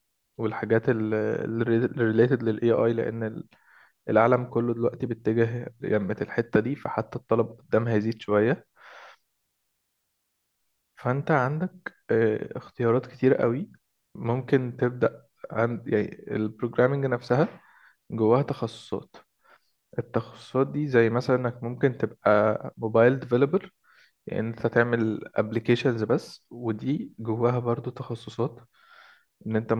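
No technical faults can be heard anywhere in the speech recording. There is nothing to place on the timeline, so no events are described.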